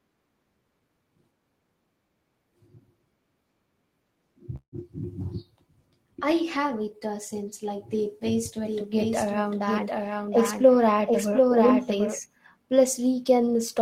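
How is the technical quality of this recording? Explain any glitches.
The recording has two clear glitches.

From 4.56 to 4.75 s the speech stalls into a fading buzz that drops to near-silence for about 90 ms, then resumes exactly where it stopped. This is a call audio freeze, likely from delayed packets draining the jitter buffer. About 164 ms was filled in, nothing was lost, and the rest arrives 164 ms late.

From 8.64 to 12.19 s, right after "since like the best", a second, somewhat quieter copy of the speech runs roughly 0.7 s behind, about 5 dB down, with no reverb tail, and it starts and stops abruptly. This doubled audio track likely comes from the same signal being captured again through a slower path.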